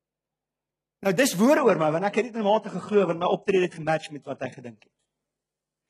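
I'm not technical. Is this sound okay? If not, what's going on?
No. From 1.58 s to the end, the sound gets duller. This is an adaptive stream at a lower bitrate. The connection slowed, so playback switched to a smaller, rougher version. Everything above 11.1 kHz is gone. The switch is sudden, with no gap.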